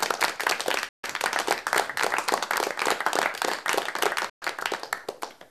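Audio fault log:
0.89–1.04 s and 4.30–4.42 s, digital broadcast dropout: the sound fades out over about 3 ms and mutes for about 150 ms and 130 ms while the receiver discards failed frames, then resumes later in the programme. Unlike a glitch or stutter, nothing repeats or smears; that stretch of audio is simply gone.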